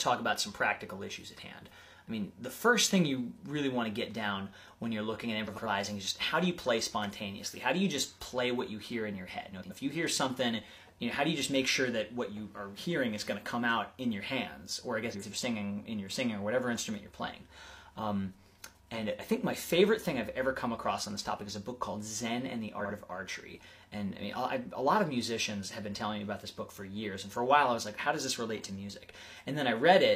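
Frames out of order: neighbouring blocks of about 93 ms were swapped at 5.47–5.67, 9.51–9.71 and 15.11–15.32 s, and about 46 ms at 22.79–22.91 s, producing brief garbled flutters.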